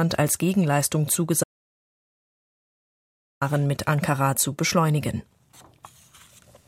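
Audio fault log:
1.44 to 3.41 s, audio dropout to silence: the sound cuts off abruptly and returns just as abruptly after about 1.98 s. The gap between is digital silence, with no room tone or background hiss, so nothing reached the recording during that stretch and whatever sounded then is lost for good. The likely cause is a brief loss of the input signal, such as a disconnected device, a failed link or a momentary mute, while recording continued writing zeros.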